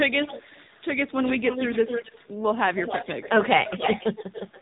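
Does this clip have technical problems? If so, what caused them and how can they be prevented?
Yes. The AMR narrowband mobile codec runs throughout: the speech sounds buzzy and synthetic, and a spectrogram shows nothing above 3.8 kHz. The plainly audible coding damage fits a low AMR-NB bitrate near 7.4 kbps. Using a wideband codec, or a higher bitrate, would prevent this.

An echo leak appears from 1.1 to 2.28 s, 2.75 to 3.49 s and 3.65 s to the end. A delayed copy of the speech trails it by about 264 to 279 ms, roughly 10 dB down at first and later only about 5 dB down. It shows as duplicated harmonic patterns shifted right in the spectrogram. This is likely a loudspeaker call whose echo canceller let the far end's voice leak back. Using a headset or a better-tuned echo canceller would prevent this.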